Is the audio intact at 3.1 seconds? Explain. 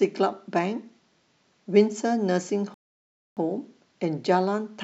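No. A rebuffering stall runs from 2.74 to 3.37 s, so 3.1 s falls in silence. The player exhausted its downloaded audio and paused until more arrived, then resumed exactly where it stopped. Nothing is lost, but 626 ms of dead air is inserted.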